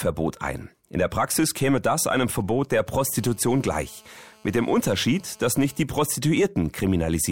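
A nearby 2G mobile phone is leaking into the audio circuit, which rectifies its radio pulses into audible interference. From 2.17 to 2.89 s the phone is only signalling, sending short clusters of bursts, and the result is GSM signalling bursts: a galloping dit-dit-dit of brief buzzes repeating at about 217 Hz, sitting roughly 30 dB below the main sound and unrelated to it. From 3.02 to 5.83 s the phone is in a call and transmitting continuously at its 217 Hz burst rate. This produces the steady GSM phone buzz, a hard, raspy tone at 217 Hz rich in harmonics, about 31 dB below the signal. It has no connection to the sound it overlays.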